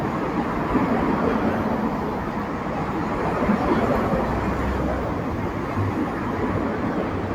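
No technical faults can be heard anywhere in the audio.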